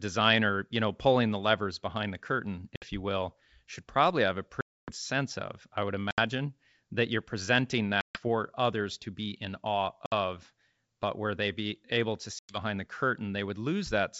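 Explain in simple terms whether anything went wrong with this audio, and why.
The speech drops out abruptly six times, at 2.76–2.86, 4.61–4.92, 6.11–6.19, 8.01–8.20, 10.06–10.13 and 12.39–12.58 seconds. This is packet loss on an ADPCM call. Chunks of the audio never arrived and were replaced by silence. The longest hole, near 4.6 seconds, loses about a quarter of a second. Because this kind of decoder predicts each sample from the ones before it, it loses track after each gap, so the speech can come back briefly at the wrong loudness or with a click before settling. The wideband telephone coding itself (G.722) sounds clear, with at most faint coding damage.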